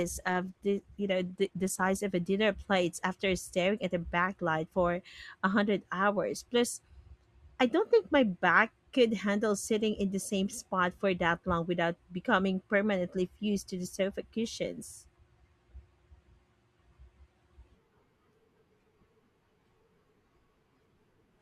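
From 0.0 to 2.0 s the speech plays as an adaptive stream starting at a low bitrate: treble is dull or synthetic and codec smearing is stronger, which points to roughly 16 kbit/s Opus. The player began cheaply before measuring the connection, then stepped up, with quality jumping just before "of a dinner plate" to something like 64 kbit/s. Unlike a rebuffering stall, the switch is instant and seamless, with no silence or repeated audio.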